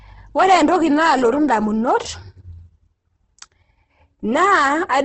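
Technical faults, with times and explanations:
Throughout, Opus compression: grainy, rough, band-limited speech with nothing above 8.2 kHz, likely from heavy low-rate encoding in music (CELT) mode, which fits around 12 kbps.
0.39–1.91 s and 4.39–4.97 s, hard clipping: crackle on peaks as peaks overdriven by about 5 dB, then about 4 dB, are cut flat, adding high harmonics.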